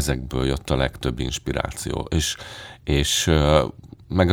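No technical faults can be heard anywhere in the recording.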